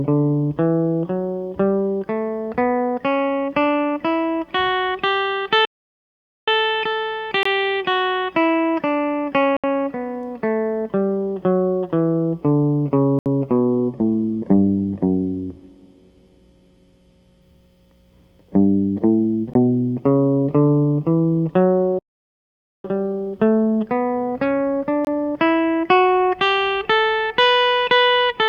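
The music stops from 5.65 to 6.48 s, about 0.82 s, and again from 21.99 to 22.84 s, about 0.85 s. These are playback stalls, likely caused by the player running out of data. Each shows as a flat gap in the waveform and an empty column on the spectrogram.

Blocks of digital silence cut in at 7.43–7.45 s, 9.57–9.64 s, 13.19–13.26 s, 19.54 s and 25.05–25.07 s. They last 16 to 70 ms, and the 23 ms ones fit a 1024-sample buffer. Each gives a short hole: silent samples with abrupt edges and a vertical broadband line at each edge.

From 13.71 to 17.50 s a call bitrate drop makes the music rough and muffled. The coarse coding points to a rate near 22 kbps, and the spectrogram's content above 12 kHz disappears until recovery.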